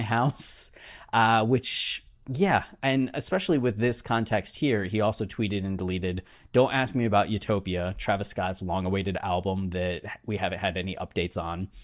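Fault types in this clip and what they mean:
No technical faults can be heard in this speech recording. Nothing in the audio calls for a fault entry here.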